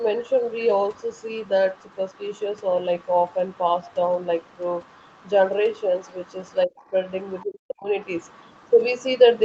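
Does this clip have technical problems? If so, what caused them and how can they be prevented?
Yes. The other side's voice is leaking through faintly, about 30 dB below the main talker from 0 to 5.31 s and 5.77 to 7.45 s, then about 35 dB down from 8.05 s to the end. It's likely residual loudspeaker echo that the canceller didn't fully remove from the mic. A headset, or better speaker-mic separation with a well-converged echo canceller, would keep it out.

There's also speech suppressed in double talk. The talker dips briefly by roughly 20 dB within 6.66 to 6.92 s, then drops much harder, around 40 dB, for about 0.4 s between 7.44 and 7.89 s. The likely cause is the echo canceller failing to tell the two apart and clamping down on both. A canceller with proper double-talk detection, or a headset so there's no echo to fight, would avoid it.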